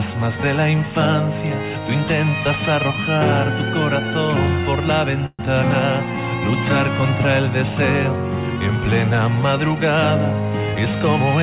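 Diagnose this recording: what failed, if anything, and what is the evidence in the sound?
Network stage: delayed packets likely emptied the jitter buffer, causing a call audio freeze from 5.26 to 5.41 s. The last sound fades out, then 30 ms of silence.

Call processing: an overfull jitter buffer trimmed pitch periods, a jitter buffer speed-up from 10.60 to 11.20 s, running 10% fast at unchanged pitch.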